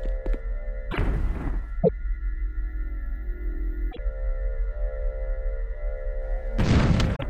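Damaged data in a compressed stream at 0.88–0.98, 1.79–1.90, 3.88–3.99 and 7.12–7.23 s: corrupt frames make the decoder lose sync, giving brief chirps, squawks, clicks or short holes.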